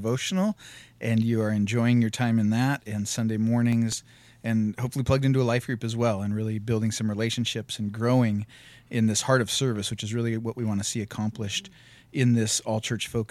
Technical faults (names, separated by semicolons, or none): CD scratch ticks